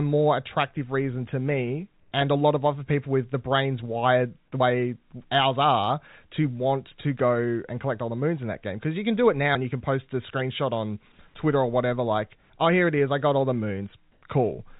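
From 2.0 to 2.12 s, after "attractive reason to me" and before "and a lot of", the background is replaced by comfort noise for 120 ms. The room sound, about 39 dB below the loud passages, turns into a flat, featureless hiss about 2 dB quieter. The likely cause is discontinuous transmission on the call path, with the receiver synthesising noise while the sender paused.

At 4.6 s, after "the brains wired the", audio is missing between chunks. Roughly a twentieth of a second is lost and the two sides are butted together, producing an abrupt skip. Its position fits a 5 s chunk boundary, likely where the recorder closed one chunk and opened the next.

From 14.12 to 14.22 s, after "I got all the", comfort noise replaces the background again for 100 ms. This time the synthetic hiss is about 5 dB louder than the real background, so the patch stands out as a brief lift in smooth noise. The whole clip, passing through a G.711 call path, has nothing above 4 kHz.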